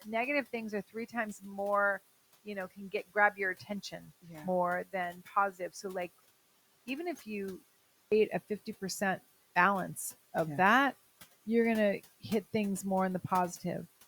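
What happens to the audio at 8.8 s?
Nothing goes wrong at 8.8 s: the speech carries on intact, with only the room's own background noise sitting about 21 dB beneath it, as it does in the recording itself.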